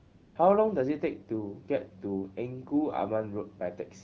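From the start to about 0.35 s the background is a steady, smooth hiss rather than real room sound, and it gives way abruptly once the talker begins. This is AMR comfort noise: the phone judged the opening silent and sent no speech frames for that stretch, so the receiving end synthesised a stand-in noise from a rough description of the background's level and spectral shape. The clear, wideband speech that follows fits AMR-WB at around 12.65 kbit/s.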